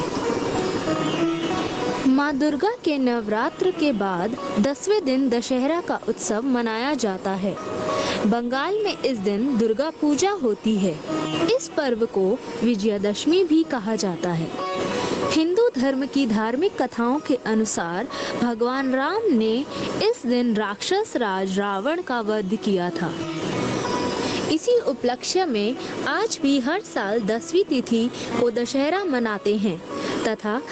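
Gain pumping runs through the whole clip. The gain swings by around 20 dB, which flattens loud and soft parts into a squashed level. The likely cause is input gain set far too high, with a fast limiter clamping it on each peak. The band stops near 8 kHz, consistent with the call codec.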